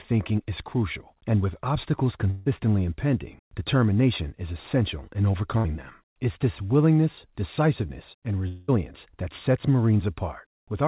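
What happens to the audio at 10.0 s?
At 10.0 s the speech comes through intact, with no dropout, glitch or distortion, only the narrow band of the telephone-style call path that leaves nothing above 4 kHz.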